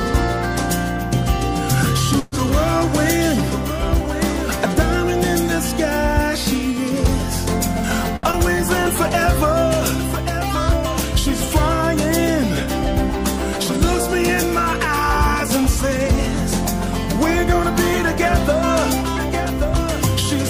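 Three network-type glitches show up in this audio. Around 2.19 to 2.35 s there's a call audio freeze: the last sound gets carried on as a fading buzz or hiss for about 125 ms, with no dead silence, and then playback resumes right where it left off, so nothing's actually lost, just delayed. The likely cause is packets getting held up in transit and the jitter buffer running dry. At 8.16 to 8.26 s there's a short stall from a late packet. The receiver stretches the current sound for about 69 ms while it waits, then carries on from the same spot, so again nothing goes missing, but that sound hangs on too long. Right after, at 8.31 to 8.36 s, it does a skip ahead. Roughly a tenth of a second of audio is gone, either dropped along the way or thrown out by an overflowing jitter buffer, and the two sides are stitched together with only about 19 ms of fill. That jump also claws back about 100 ms of the delay built up earlier.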